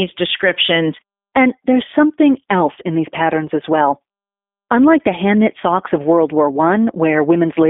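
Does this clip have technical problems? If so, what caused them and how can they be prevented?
Yes. Throughout, the speech sounds boxed-in, slightly rough and synthetic, with nothing above 3.7 kHz. This is G.729 codec damage: each frame is rebuilt from a vocal-tract filter, a pitch predictor and a few pulses, consistent with 8 kbit/s. Choosing a wideband codec such as Opus or G.722 prevents it.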